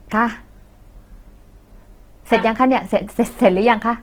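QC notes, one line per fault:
Throughout, Opus compression: speech turns rough and grainy as bands are refilled with noise, bandwidth still reaching 20.2 kHz, likely CELT-mode Opus around 16 kbps.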